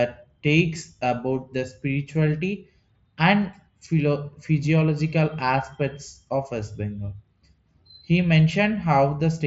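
The speech comes over a Bluetooth mSBC headset codec link with nothing above roughly 7.7 kHz and a light grain on louder passages, consistent with that wideband path working as intended, and no faults are present.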